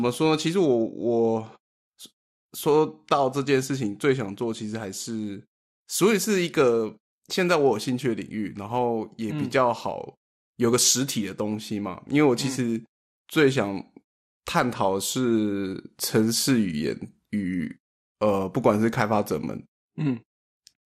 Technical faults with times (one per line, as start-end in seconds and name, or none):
0.00-20.87 MP2 compression